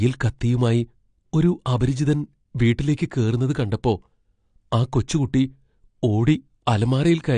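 Speech that has likely been squeezed through low-bitrate AAC compression throughout, consistent with AAC-LC at 32 kbps. The encoder discards everything above 9.8 kHz and coarsely quantises the rest, leaving plainly audible damage: a dull, smeared sound with a warbling, fizzy texture on sibilants.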